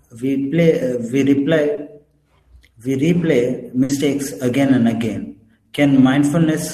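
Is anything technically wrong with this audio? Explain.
Yes. The speech has two network faults.

From 1.75 to 1.79 s there is a short concealed packet loss. About 20 ms of audio never reached the decoder in time. The receiver covered the hole by extending the sound just before it, then blended back into the real signal. You hear a brief smear or wobble. A short consonant there may be lost.

From 3.83 to 3.91 s a burst of packet loss occurs. Around 60 ms of consecutive audio arrived too late or not at all. The receiver stretched the last received sound and faded it down across the gap. This gives a held, dimming tone or hiss. The speech then resumes with that stretch missing.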